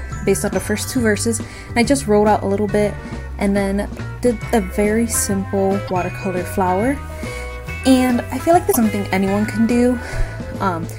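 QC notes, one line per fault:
5.84 to 5.91 s and 8.69 to 8.76 s: damaged data in a compressed stream. At both points a stretch of the encoded data arrives corrupted, so the decoder cannot rebuild those frames correctly and loses its place until it finds the next valid frame header. What plays out for roughly 70 ms each time is a short chirp, squawk, click or hole, before normal playback resumes.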